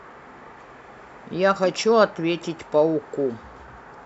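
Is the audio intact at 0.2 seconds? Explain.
Yes, at 0.2 seconds the speech plays through cleanly, with no dropout, click, distortion or other fault at that point.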